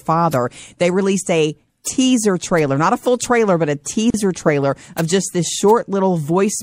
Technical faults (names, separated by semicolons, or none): MP3 compression; bit error spike; gap at a join of encoded pieces